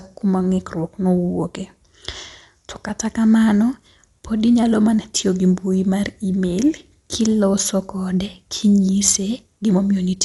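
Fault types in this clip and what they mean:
Dolby Digital compression: likely cause of the dull, band-limited speech with nothing above 11.5 kHz and rough, fluttering dither noise around tones, unlike the swirly artefacts of MP3-style coding.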